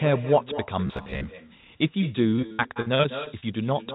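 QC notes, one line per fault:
Throughout: echo with no canceller, a quieter copy of the speech returning roughly 0.2 s later at about 13 dB down, thin, from far-end loudspeaker pickup.
0.87–1.29 s: robotic sound from repeated short buffers, a rigid metallic buzz near 67 Hz, likely from a roughly 15 ms chunk replayed while fresh audio arrives late.
2.3–3.44 s: repeated packet loss (robotic sound), 12 gaps up to 60 ms each patched by extending prior audio, about 28% concealed, giving choppy, broken speech.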